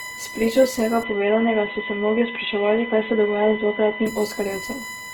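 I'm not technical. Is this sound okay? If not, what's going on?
No. USB whine runs through the whole clip: a steady, fixed-pitch tone at 1 kHz, loudest at 2 kHz. The computer's USB connection draws power in regular one-millisecond bursts, and that rhythm leaks into the audio circuit as a constant hum.

Opus compression is also present from start to finish, and is the likely cause of the rough, grainy texture on the speech. When the file was squeezed small, the encoder ran short of detail and filled gaps with noise-like sound, leaving the speech gritty.

Input switched to a poorer device from about 1.03 s to 4.07 s. The sound turns dull and boxy, losing everything above 3.8 kHz, then clears again. The recording likely jumped to a lesser microphone or headset mid-way, with no gap or volume change at the switch.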